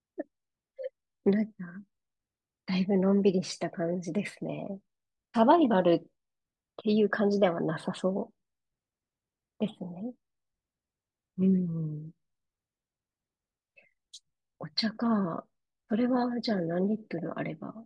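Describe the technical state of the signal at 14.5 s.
At 14.5 s the speech signal is intact, with no audible fault at that point.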